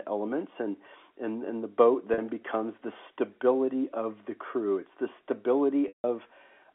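At 2.14 to 2.18 s, between "and and the boat" and "becomes the stability of", packet loss with pitch repetition fills a 40 ms gap with a held, buzzy pitch period, consistent with two 20 ms packets. At 5.88 to 6.04 s a 160 ms loss starts the same way and then fades to silence. Unlike a plain dropout, neither gap has a hard cut or click. Both sit within the narrow telephone band.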